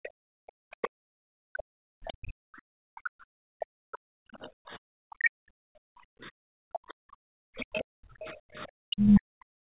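Background gating by the echo canceller runs through the whole clip. Whenever the far end plays, the microphone is pulled down hard, by about 40 dB at its deepest, so the room tone dips or vanishes and then returns. The ambience pumps in and out rather than sitting at a steady floor. The band stops at 4 kHz throughout, which fits a G.711 mu-law call leg at 64 kbps.

Speech suppression in double talk appears first at 0.6 to 0.65 s, then at 1.84 to 1.99 s and 6.7 to 7.71 s. The speech is briefly turned down by roughly 40 dB, so it drops out in short pieces of about 50 ms in the first case and about 150 ms in the others. The cause is likely the canceller failing to tell the near talker from loudspeaker echo while both sides were active, and attenuating everything.

The other side's voice leaks through at 0.83 to 0.88 s, 5.24 to 5.3 s and 8.99 to 9.2 s. Faint scraps of a second voice sit under the speech, at around 35, 30 and 25 dB below it respectively, so they grow more noticeable toward the end. 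This is likely residual echo that the canceller did not fully remove from the microphone signal.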